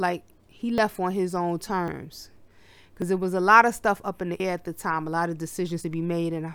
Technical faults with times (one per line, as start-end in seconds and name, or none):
0.78 dropped buffer (overrun)
1.88 dropped buffer (overrun)
3.02 dropped buffer (overrun)
4.40 dropped buffer (overrun)
5.84 dropped buffer (overrun)